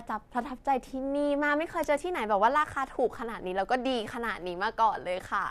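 No technical faults can be heard anywhere in this speech recording. Nothing in the audio points to a problem anywhere in the recording or transmission chain.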